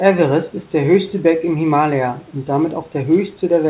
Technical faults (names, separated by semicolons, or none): none